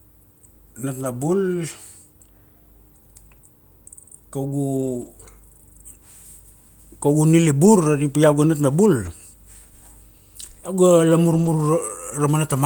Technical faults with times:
1.03-1.05 lost packet rebuilt from error correction
4.77-5.07 lost packet rebuilt from error correction
7.65 lost packet rebuilt from error correction
9.05 lost packet rebuilt from error correction
11.33-11.47 lost packet rebuilt from error correction

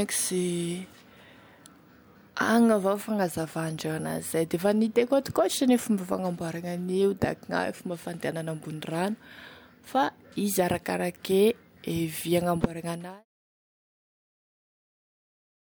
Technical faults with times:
none

